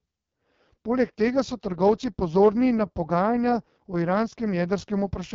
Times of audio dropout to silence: none

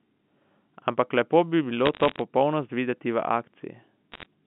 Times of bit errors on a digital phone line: 1.86-2.21, 4.12-4.26

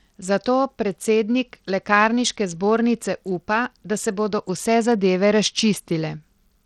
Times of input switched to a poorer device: none

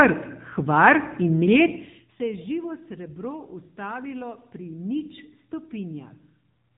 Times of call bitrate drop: none

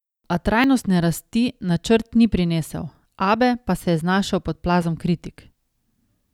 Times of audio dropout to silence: none

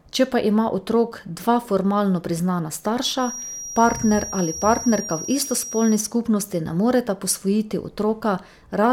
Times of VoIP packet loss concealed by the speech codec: none

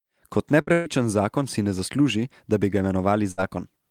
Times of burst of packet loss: 0.61-0.88, 3.31-3.40

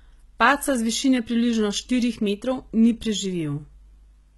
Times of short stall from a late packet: none

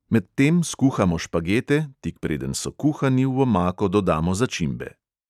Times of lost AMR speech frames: none

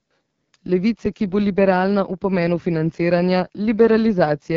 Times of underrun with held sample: 1.06

